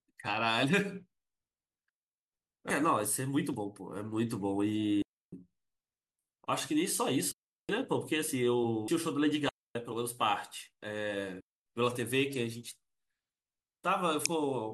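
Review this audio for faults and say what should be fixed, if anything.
Digital wireless dropouts at 1.89–2.32, 5.02–5.33, 7.32–7.69, 9.49–9.75 and 11.41–11.66 s: the receiver mutes for 0.26 to 0.43 s, leaving clean silent gaps without noise bursts. Improve RF reception by shortening transmitter–receiver distance, keeping line of sight, and choosing a clearer channel.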